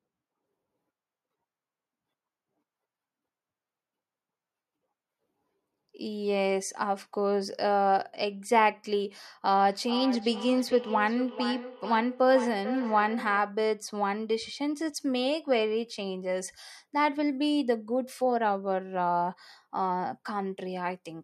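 From 9.63 to 13.59 s there is feedback echo between two devices: another device's playback re-enters the microphone, repeating the speech roughly every 400 ms at about 10 dB below it.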